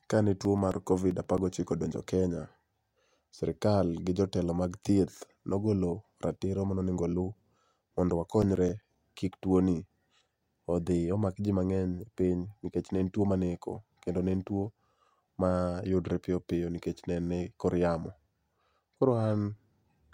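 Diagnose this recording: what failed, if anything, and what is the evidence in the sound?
The failure is in playback from disc: CD scratch ticks. Two bursts of short, regular ticks run through the speech. The first spans 0.45 to 1.64 s, with ten ticks. The second spans 8.16 to 9.22 s, with nine. Both repeat at about eight per second, each lasting only a few milliseconds. A scratch on the disc defeats error correction once per revolution. The player then conceals or mutes the lost samples, leaving a periodic click.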